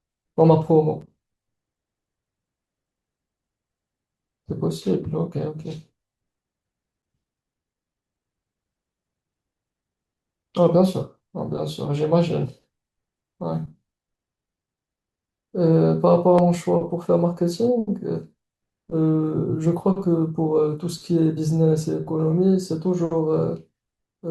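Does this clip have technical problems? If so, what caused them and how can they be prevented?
Yes: a gap between stream segments silences this speech at 1.01 s and 7.02 s, 6 s apart, which fits 6-second segments. Unlike a dropout, no audio is lost. Aligning segment timestamps contiguously at packaging prevents it.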